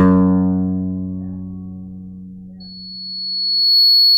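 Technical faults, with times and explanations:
2.60 to 4.18 s, loudspeaker feedback squeal: a 4.4 kHz tone swells over about a second until it sits a few dB above the music. A microphone hears its own loudspeaker. At that frequency loop gain exceeds one, so the tone feeds itself to the end.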